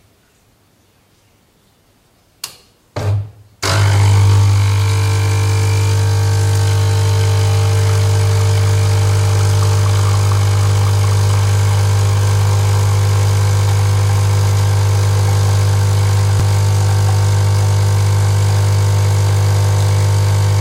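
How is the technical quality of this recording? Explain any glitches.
There is one glitch, at 16.40 s: a brief jump where the sound skips forward with no gap of silence. The likely cause is a dropped buffer (overrun): the recording software fell behind, the hardware overwrote a few milliseconds of samples, and the audio on either side was spliced together directly.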